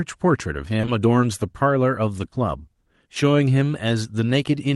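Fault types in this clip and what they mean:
Short concealed packet loss, 0.81 to 0.89 s and 2.25 to 2.33 s: missing audio arrived too late, so the receiver extended the preceding sound, leaving brief smeared wobbles.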